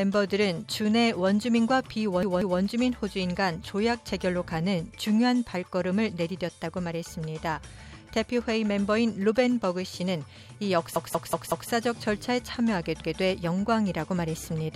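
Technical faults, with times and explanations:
2.23–2.60 s: repeated buffer. One block of about 186 ms plays twice more with hard joins, heard as a stutter. This fits an 8192-sample buffer that was not refilled in time.
10.96–11.70 s: repeated buffer. A block of about 186 ms repeats four more times, giving a longer stutter that again points to an 8192-sample buffer.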